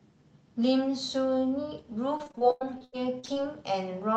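From 2.17 to 3.37 s, repeated packet loss makes the speech choppy and robotic. Roughly a third of that stretch is patched by stretching earlier sound, with gaps up to about 0.1 s.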